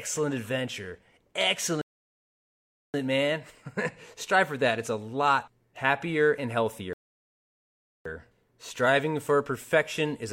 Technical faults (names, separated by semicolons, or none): rebuffering stall